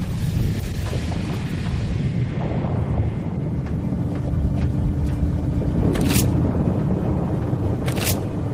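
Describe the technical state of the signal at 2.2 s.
A jitter buffer speed-up runs from 2.23 to 3.29 s: the receiver trimmed about 50 ms of excess buffered audio in pitch-period slices, so the sound plays at 104% speed without changing pitch.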